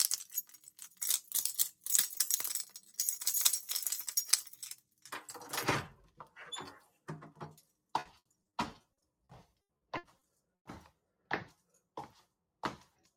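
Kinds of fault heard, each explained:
Noise suppressor applied to music or sounds: A suppressor tuned for speech stays active for the whole clip. It treats anything steady or lingering as noise to be removed, so the level keeps rising and falling by around 10 dB as it decides what to keep. Sharp onsets mostly pass, while sustained parts and their tails get pulled down. The result is a restless, pumping quality and a thinner sound than the source should have.
Sound cut by the noise suppressor: There are four moments where the suppressor digs in harder than elsewhere: 0.25 to 1.01 s, 2.66 to 2.99 s, 4.44 to 5.09 s and 6.8 to 6.99 s. In each, the held or fading part of the sound sinks by about 10 to 11 dB, so decays get clipped short and the sound dips away, while anything abrupt at those points still pokes through.
Repeated packet loss (robotic sound): From about 7.99 to 10.67 s the stream keeps dropping chunks, with a dozen or more short holes, the longest about 100 ms. 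Each hole gets patched by stretching out whatever came just before, and together those patches cover roughly 620 ms, close to a quarter of that stretch. Because the fills come so close together, the sound turns choppy, with pieces missing.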